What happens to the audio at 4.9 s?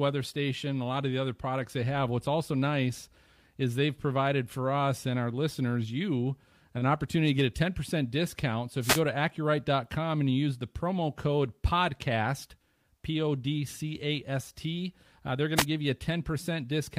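Nothing goes wrong at 4.9 s: the speech runs on intact there, with no dropout, click, distortion or other fault at that moment.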